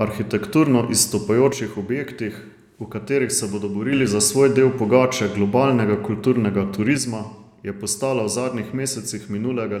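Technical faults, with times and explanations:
1.53–3.93 s and 6.98 s to the end, one channel drops out: the speech suddenly sinks by about 6 dB and then jumps back up just before "za svoj del pogače". It sinks the same way again right after "del pogače globalnega kulturnega" and stays down until the clip ends. That clean, fixed 6 dB step is what you'd hear if one stereo side likely went silent before the mono sum, so only half the shared signal is left.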